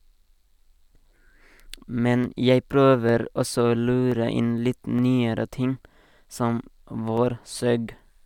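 Sharp clicks at 2.24, 3.09, 4.12, 4.99 and 7.17 s, likely dropped samples: a fraction of a millisecond lost, so the waveform steps abruptly, a thin vertical line on the spectrogram.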